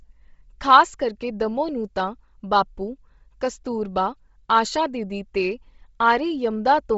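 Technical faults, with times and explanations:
Throughout, Bluetooth LC3 compression: the speech carries a breathy, grainy edge and nothing above 7.7 kHz, likely from heavy LC3 coding, which fits a 24 kbps setting with 7.5 ms frames, zeroing much of the upper spectrum and filling it with noise.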